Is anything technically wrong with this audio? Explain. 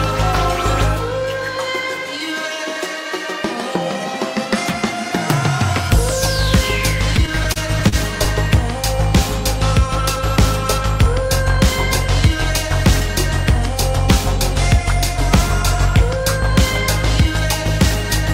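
Yes. Repeated stalls (stutter) occur between 7.16 and 8.28 s: packets arrived late, so the jitter buffer kept running dry, and the receiver stretched the last sound through nine brief gaps, none longer than 39 ms. Nothing is lost, but the audio drags and stutters.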